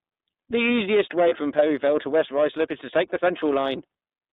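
The whole speech clip runs through the iLBC codec. It is a narrowband VoIP coder. The band is held to about 200 Hz to 3.7 kHz, so the voice sounds thin and boxed in. Each frame's excitation is coded alone. The coding damage is plainly audible as a rough, slightly synthetic edge. The frame timing fits the 30 ms mode, which points to a rate near 13.33 kbps.

From 1.29 to 1.33 s, one iLBC frame is lost, about 30 ms of audio. The decoder fills the hole by repeating the last pitch cycle mixed with noise. It comes across as a brief held, buzzy vowel. The gap is short, so there is no audible fade. Since iLBC frames do not depend on earlier ones, the voice is right again almost at once.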